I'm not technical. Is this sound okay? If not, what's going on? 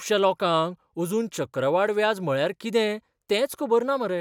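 Yes, nothing wrong can be heard in this recording.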